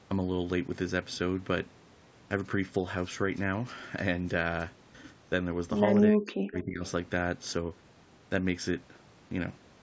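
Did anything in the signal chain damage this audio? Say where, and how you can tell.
Yes, at the call processing stage. Speech suppressed in double talk appears from 6.07 to 6.83 s: the level collapses by roughly 40 dB at its deepest, with some 700 ms affected in total. The likely cause is an echo canceller that, with both ends talking at once, could not tell the near-end talker from loudspeaker echo and attenuated everything together, so the sound sinks and breaks up instead of carrying through.

An echo leak follows almost immediately, from 6.87 to 6.91 s. A faint, brief delayed copy of the speech surfaces, lagging the original by 323 ms and sitting around 30 dB below it. That points to a loudspeaker-side echo canceller that likely failed to fully remove what its microphone picked up and returned the residue down the line. It is heard as a short ghost of earlier speech rather than a sustained echo.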